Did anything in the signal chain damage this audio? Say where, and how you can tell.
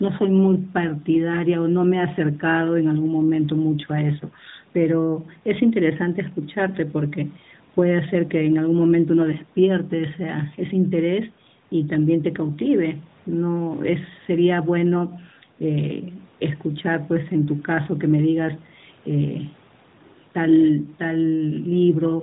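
No, nothing in this speech clip stood out as damage from any stage of the signal chain when I listened to it.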